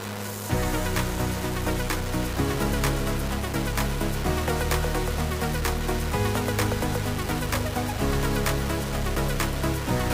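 Low bit depth without dither runs through the whole recording, from the first moment to the last. The sound is coarse and grainy, with a distortion that shifts along with the signal. Quiet passages turn gritty, and the faintest parts either cut to silence or sputter. The error sits only about 10 dB below the sound, which fits roughly 4-bit resolution. The likely cause is rounding to a few levels with no dither.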